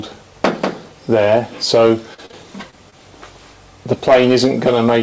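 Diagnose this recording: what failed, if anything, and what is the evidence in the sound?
Short concealed packet loss in the network and jitter-buffer stage causes brief smears at 2.14–2.20 s, 2.26–2.31 s, 2.31–2.35 s, 2.71–2.74 s and 2.90–2.94 s. Each is a 20 or 40 ms hole the decoder bridged by extending the preceding sound. A spectrogram shows stretched, too-steady patches ending in visible seams.

Hard clipping, overdriven by about 9 dB, runs from 3.91 s to the end, likely at a converter or sample-format stage. The waveform shows flat-topped peaks, heard as harsh fuzz. The spectrogram shows vertical harmonic smears filling the band up to the G.722 path's 8 kHz ceiling.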